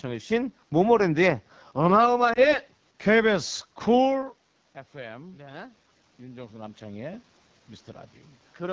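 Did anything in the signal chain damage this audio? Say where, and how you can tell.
Yes. At the codec stage, the AMR wideband (HD Voice) codec is audible throughout. The speech sounds rough and raspy, which fits AMR-WB's second-lowest rate, 8.85 kbit/s. Because this roughness is constant rather than episodic, it points to low-rate coding rather than network loss.

At the network stage, lost AMR speech frames show up from 2.33 to 2.56 s. The sound briefly dips and warbles, which fits a single lost 20 ms frame concealed by reusing the previous pitch and vocal tract settings. It doesn't drop to near silence, as a longer loss would.

At the call processing stage, automatic gain rising runs from 4.91 to 7.3 s. The level climbs gradually by about 5 dB, with the voice and room noise swelling together. The talker's move near 4 s changes only the voice, whereas the gain control lifts the background with it.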